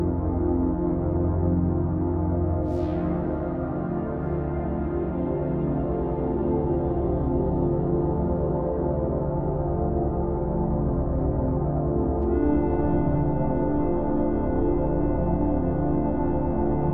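Nothing in the audio stood out as a technical problem on listening.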